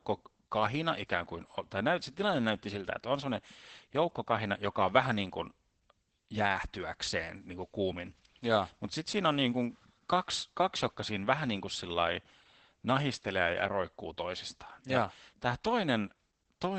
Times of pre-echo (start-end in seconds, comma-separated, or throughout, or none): none